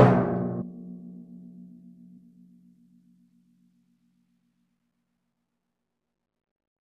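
Damaged data in a compressed stream shows up at 0.61, 2.16 and 4.69 s. Corrupted bytes make the decoder misread those frames and lose sync until it finds the next frame header, and each spot in the everyday sound breaks into a brief chirp or blip.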